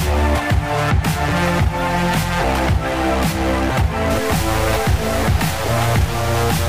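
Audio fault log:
4.10–6.68 s, stuck bit: From 4.10 s to the end, one data line from the converter likely sticks at a fixed value, so about half the samples land off by that bit's weight, a step of about -25 dBFS. Because which samples are hit depends on the waveform, the error follows the signal as harsh, buzzy distortion. Quiet stretches also fill with noise, since the bit also changes with the sign of small values.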